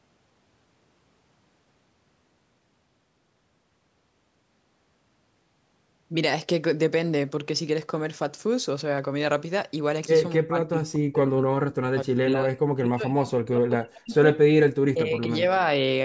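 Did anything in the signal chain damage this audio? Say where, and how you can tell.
Yes. Word clock ticks at the converter: sharp ticks roughly every half second from 0.31 to 15.7 s, one slipped sample each, fitting a clock mismatch of about 40 ppm.

Speech suppressed in double talk, likely from call processing: the speech dips by up to about 40 dB from 10.4 to 14.27 s and from 14.5 to 15.44 s. The echo canceller has turned it down.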